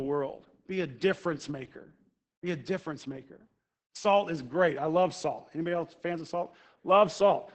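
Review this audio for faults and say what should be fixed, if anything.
Opus voice compression is present throughout the speech. Nothing is heard above about 8 kHz, which fits wideband SILK coding. The linear-prediction coder spends so few bits on the excitation that the voice turns muffled, hoarse and faintly robotic, which points to a rate near 10 kbps. The damage is heavy. To prevent it, encode at a substantially higher Opus bitrate or keep an uncompressed master.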